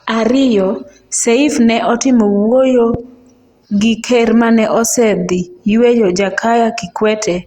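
At 2.94 to 2.97 s, right after "ne otimo wuoyo", a single loud pop lands on the speech, peaking roughly 10 dB above it. A sudden voltage pulse, likely from a plug, switch or static discharge, was added to the signal and briefly shaped by the circuits downstream. Unlike a dropout or an edit click, nothing is removed: the speech continues underneath. The pop sounds fuller than a tiny click.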